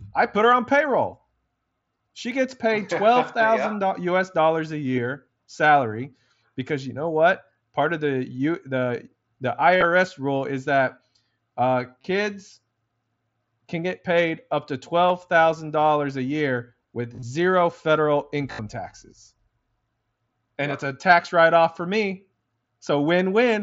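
Concealed Bluetooth headset packet loss occurs where voice packets from the headset to the phone were dropped and the receiver filled each gap by repeating the best-matching stretch of recent waveform. Longer runs sound like a brief buzzy, held tone with a slight warble as real audio resumes. It happens at 9.77 s, after "the you the the" and before "rule is that"; at 12.01 s; at 15.09 s, after "get paid up to"; at 17.13 s, after "dollars a year"; and at 18.52 s. The longest patches last about 70 ms.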